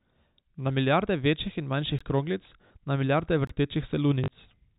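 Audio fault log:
1.99 s and 3.47 to 3.49 s: block of digital silence. Sound drops straight to silence and back, about 17 ms then 21 ms. The second fits a 1024-sample buffer underrun.
2.68 to 2.70 s and 4.24 to 4.28 s: packet loss with last packet repeated. A 20 ms and then a 40 ms stretch are replayed, and the longer one buzzes robotically at 50 Hz.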